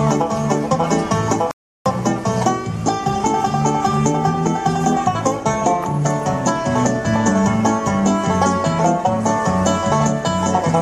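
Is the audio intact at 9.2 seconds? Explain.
Yes, the audio is intact at 9.2 seconds, with no dropout, click, distortion or other fault at that point.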